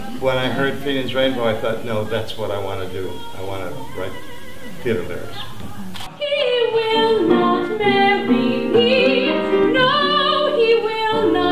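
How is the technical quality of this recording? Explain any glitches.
No glitches or technical faults can be heard anywhere here.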